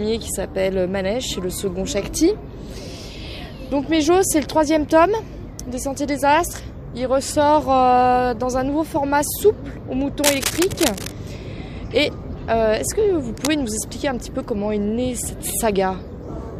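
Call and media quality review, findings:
Cable scratch noise, 10.24–11.12 s and 13.31–13.48 s: dense, uneven scratching bursts over the sound, the first roughly 5 dB below signal level, the second about 10 dB below. Likely a worn cable or connector shifting, its contact resistance fluctuating rapidly.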